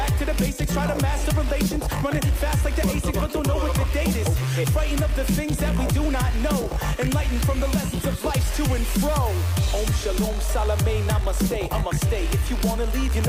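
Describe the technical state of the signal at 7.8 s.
At 7.8 s the signal is intact, with no dropout, distortion or other fault present at that moment.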